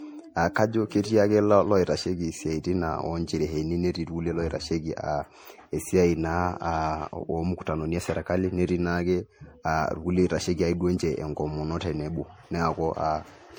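Generation loss runs through the whole speech clip: it sounds swirly, hollow and smeared, with blurred consonant attacks. This is likely from repeated MP3 re-encoding, roughly four passes, at a bitrate that points to about 64 kbit/s, and the damage goes beyond what one encode alone would leave.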